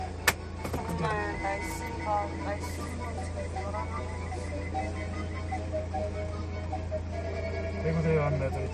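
At 7.58 s a single sharp click cuts through the audio, and the likely cause is dropped samples: roughly one sample has gone missing from the stream. The waveform there jumps abruptly from one value to a later one instead of moving smoothly, and that step produces the click. The gap lasts only a tiny fraction of a millisecond, so no sound is lost. On a spectrogram it appears as a thin vertical line spanning the frequency range.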